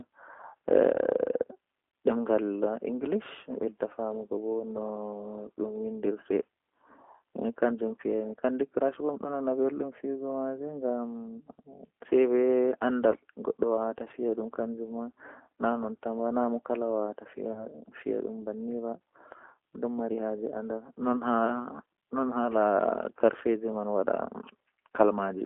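Throughout, the speech carries G.729 codec damage, plainly audible. The line passes only about 250 Hz to 3.5 kHz. Each frame is rebuilt from a filter, a pitch predictor and a few pulses. The result sounds rough and synthetic, which fits an 8 kbit/s G.729A coder.

At 13.10 to 13.15 s and again at 17.53 to 17.65 s there is VoIP packet loss concealed by the speech codec. Each gap fits one lost 20 ms packet. The decoder extends its last pitch and filter into a buzzy tone or coloured noise that fades. Recovery drags on, more so at 17.5 s.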